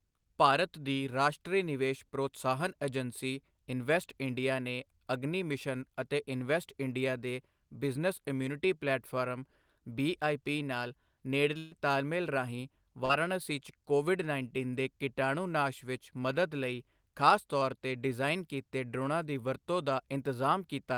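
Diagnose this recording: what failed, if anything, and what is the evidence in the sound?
At 11.57 to 11.73 s, just before "ਤਾਲਮੇਲ ਰਾਹੀਂ", the sound stretches into a held, fading tail, then jumps ahead. This is a burst of packet loss on the network path: about 140 ms never arrived, and the receiver extended and faded the last sound across the whole gap instead of going silent.

From 13.05 to 13.11 s, between "ਤਾਲਮੇਲ ਰਾਹੀਂ" and "'ਚ ਕੋਵਿਡ ਉੱਨੀ ਦੇ", there is a brief smear. This is short concealed packet loss, also on the network: about 40 ms went missing, and the decoder filled it by continuing the preceding sound before blending back into the real stream.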